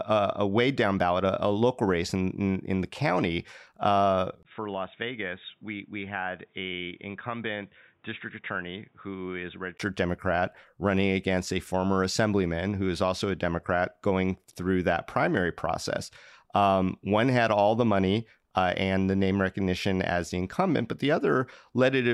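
Most likely the input switched to a poorer device in this speech recording. Just after "in the county uh", at 4.43 s, a 20 ms gap leads into duller, quieter sound with nothing above 3.8 kHz and faint new background noise, until fuller sound returns at 9.80 s.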